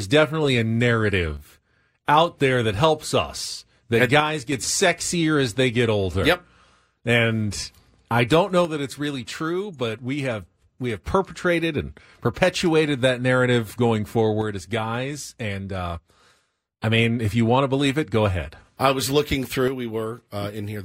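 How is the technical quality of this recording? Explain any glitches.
The speech has repeated level dips: at 1.4–2.0 s, 4.2–4.5 s, 8.7–11.1 s, 14.4–16.8 s and 19.7 s to the end, the level drops abruptly by about 6 dB, likely because one channel drops out before the mono sum.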